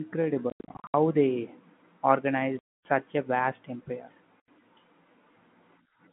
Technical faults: packet loss filled with silence

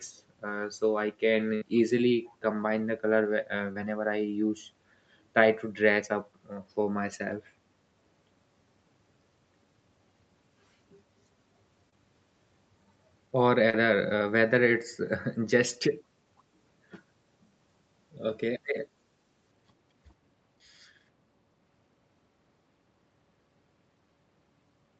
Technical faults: burst of packet loss; echo leak; short concealed packet loss

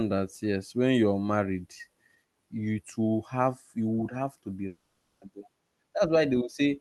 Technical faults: long network dropout

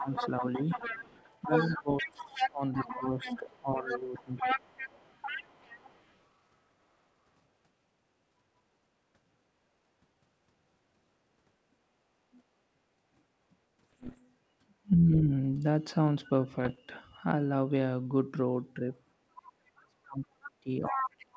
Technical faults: speech suppressed in double talk; other side's voice leaking through; bit errors on an ADPCM link

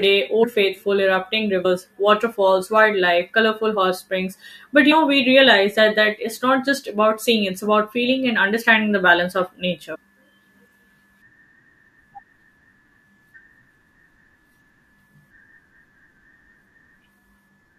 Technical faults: compressed frames skipped

